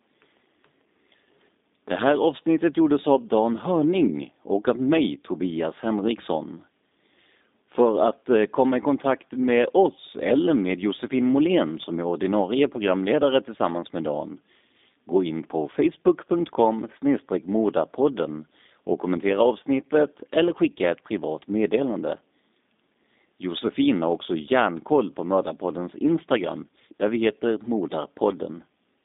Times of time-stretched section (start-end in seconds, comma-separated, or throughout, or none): none